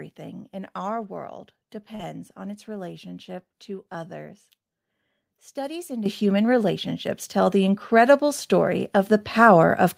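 At 1.95 to 2.01 s there is a short concealed packet loss. About 40 ms of audio never arrived, and the receiver bridged it by extending the preceding sound, giving a brief smear. Unlike a plain dropout, there is no silent hole.

The microphone volume stepped up at 6.06 s by about 10 dB, then at 7.08, 8.10 and 9.12 s by about 3, 2 and 2 dB. The software raised the input gain in discrete jumps, so voice and background rise together, which sets this apart from a talker simply speaking louder.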